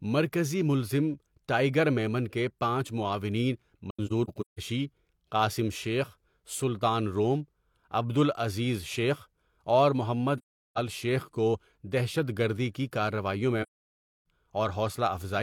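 AAC frame loss with muting leaves soft-edged silent holes at 3.90–4.59 s after "میمن کے پانچ معاونین", scattered in runs of up to about 150 ms. It happens again at 10.38–10.78 s, between "شیخ اور" and "شیخ کو دہشت گردی", and at 13.62–14.25 s. The missing frames decode as silence, and overlapping windows fade each gap out and in. That gradual edge, with no click, is what sets it apart from a hard dropout.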